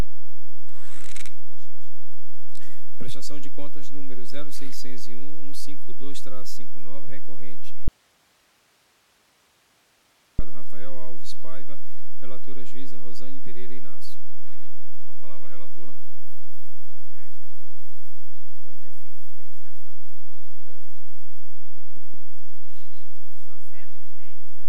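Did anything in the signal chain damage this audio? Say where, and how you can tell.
Yes: from 7.88 to 10.39 s the sound abruptly drops to faint hiss, an audio dropout to a faint residue, likely an interrupted analogue connection.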